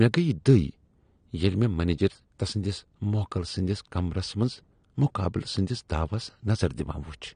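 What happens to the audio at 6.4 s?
At 6.4 s the speech carries the same damage it has from start to finish: it is dull, and sibilants and held sounds take on a warbling, fizzy smear. That points to AAC compression, likely AAC-LC at a rate that fits about 32 kbps, where coarse quantisation of each frame's spectrum leaves holes and noisy fill. A simple low-pass filter would darken the sound cleanly without that swirling texture.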